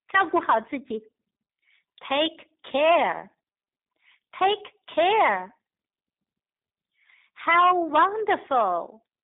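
From start to finish the speech carries plainly audible G.729 codec damage. The band runs only from 150 Hz to 3.7 kHz, and the speech is rebuilt from a filter model and sparse pulses, so it sounds rough and synthetic. A plain telephone filter would narrow the band but leave the speech clean. This points to an 8 kbit/s G.729A stream.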